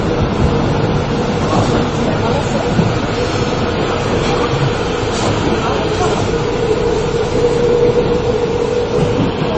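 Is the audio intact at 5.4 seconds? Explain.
No. At 5.4 seconds, as throughout, the sound is dull above 8.2 kHz, with the artefacts of different codecs layered on one another. This is likely transcoding between lossy codecs: one low-bitrate encode, consistent with Vorbis, re-encoded as low-bitrate MP3, each stage adding its own damage.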